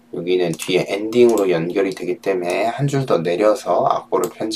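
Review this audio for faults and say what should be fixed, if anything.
No faults detected; nothing to fix.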